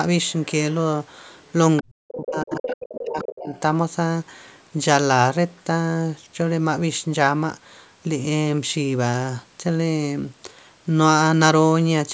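Faint scraps of a second voice surface at 0.26 to 0.46 s, 1.42 to 1.52 s and 1.77 to 1.82 s, very quiet at first and then clearly audible. This is the other side's voice leaking through, likely loudspeaker echo the canceller failed to remove. From 1.82 to 3.52 s the talker's speech dips sharply, falling by as much as around 40 dB. This is speech suppressed in double talk, likely the canceller turning down both voices while both sides spoke. Overlapping that stretch the leaking voice returns louder, at 2.57 to 2.77 s and 3.22 to 3.6 s. A last barely audible trace of it appears at 5.57 s.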